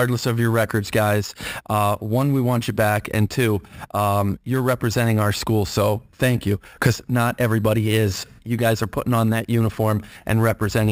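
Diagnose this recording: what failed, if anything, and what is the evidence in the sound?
Imaging from sample-and-hold upsampling at the sample-rate conversion stage, throughout: a metallic fizz at 6–12 kHz, about 19 dB below the speech, from unfiltered sample repetition going from 12 kHz to 44.1 kHz.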